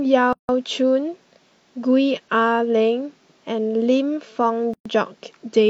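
Separately encoded pieces were joined without trimming encoder delay and final-frame padding, so gaps at a join of encoded pieces open in the speech: a 161 ms gap from 0.33 to 0.49 s, and 119 ms from 4.74 to 4.86 s. Each has smeared edges before the sound resumes where it stopped.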